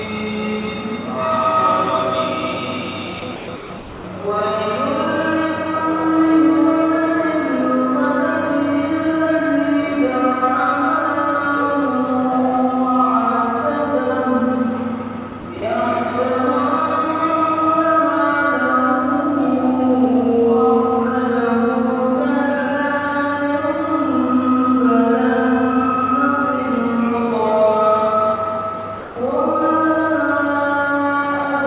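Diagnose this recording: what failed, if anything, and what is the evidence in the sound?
Call processing is where this went wrong, and the likely culprit is sound dropped by the voice detector at the sending end. The sound gives way to flat, steady noise in bursts at 3.20–3.22, 3.36–3.48, 3.56–3.70 and 3.78–4.04 s, then 15.30–15.32, 15.40–15.44 and 15.60–15.62 s, and once more at 29.00–29.16 s. Each time the sender judged the signal to be background and stopped transmitting, and the receiver filled the gap with comfort noise until the detector triggered again. Everything sits below 4 kHz, which fits a 64 kbps G.711 mu-law call path.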